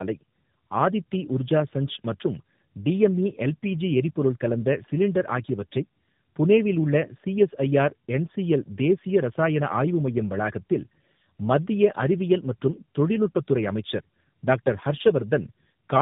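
Right from the start and all the way through, this speech has the sound of tandem speech coding: the call seems to pass through two low-rate speech codecs in a row, each re-encoding the other's damage. It comes out rough, muffled and warbly, nothing above 3.8 kHz, which fits a G.729A leg followed by AMR-NB.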